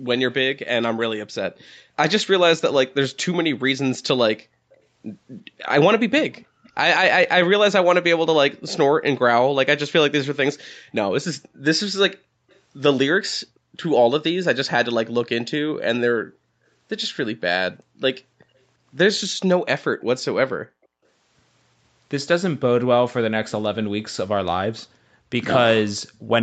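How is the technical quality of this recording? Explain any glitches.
The recording carries two recurring call-path faults: an echo leak and background gated by the echo canceller, with the audio band topping out at 8 kHz as the Opus call path passes it.

Echo leak appears at 0.04–1.65 s, 4.72–6.69 s, 12.5–15.29 s and 23.49–26.2 s. A faint copy of the speech trails the original by 346 ms, roughly 30 to 40 dB down. The likely cause is a far-end loudspeaker whose echo canceller left some residual echo in its microphone signal.

Background gated by the echo canceller occurs within 1.47–4.72 s, 11.38–17.93 s and 24.89–25.3 s. The room tone dips sharply, by as much as about 40 dB, for a few tenths of a second up to about a second in total per stretch. This happens while the canceller suppresses the microphone during loudspeaker playback, and the background comes back once it releases.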